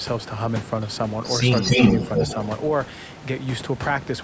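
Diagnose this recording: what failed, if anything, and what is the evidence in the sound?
From 1.56 to 2.46 s, a second copy of the speech trails the first by 280 ms at roughly equal level: an echo leak. On a spectrogram, harmonic patterns repeat shifted right, and the waveform shows doubled envelopes. This is call processing, likely a loudspeaker-side echo canceller passing its microphone pickup back.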